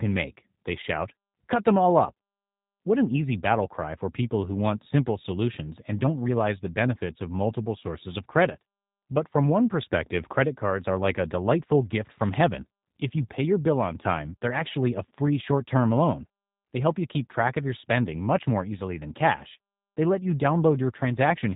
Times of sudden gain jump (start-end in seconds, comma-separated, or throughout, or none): none